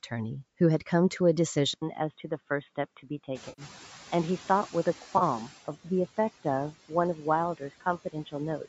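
At 1.74 s the sound turns duller and quieter, by about 5 dB, after an 80 ms gap, and stays that way to the end. A new noise floor sits roughly 30 dB down. This is most likely an input switched to a poorer device.

From 3.49 to 3.62 s, a 90 ms stretch turns smeared and noisy. The decoder is filling in lost frames from the last good spectrum, which is AAC frame loss with concealment. A shorter 30 ms patch of the same kind follows at 5.18 to 5.23 s.

Around 3.5 s the room noise rises by about 17 dB. From 3.34 s the noise suppressor is catching up: the noise first comes through with less reduction, then sinks by about 13 dB over 2.3 s, settling by 5.65 s as the noise estimate adapts.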